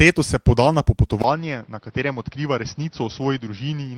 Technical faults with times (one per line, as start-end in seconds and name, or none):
1.22-3.98 input switched to a poorer device